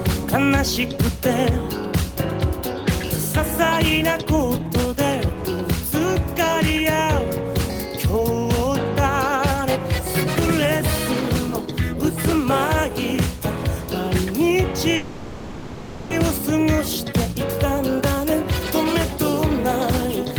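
At 14.95 s the audio stalls in a call audio freeze lasting until 16.12 s. The last sound is stretched into a decaying buzz or hiss for about 1.15 s, likely because packets were held up and the jitter buffer ran dry. Playback then resumes where it stopped, with nothing lost.

From 17.95 to 18.03 s a jitter buffer speed-up follows as the receiver sheds some of the extra delay. Short pitch-period pieces, roughly 40 ms in total, are cut, so the sound briefly runs at 159% speed without a pitch shift and sounds hurried.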